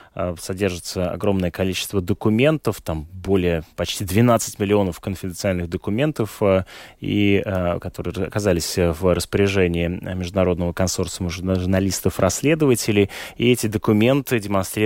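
No technical faults can be heard anywhere in this speech recording. Nothing in the audio points to a problem in how it was captured, processed or played back.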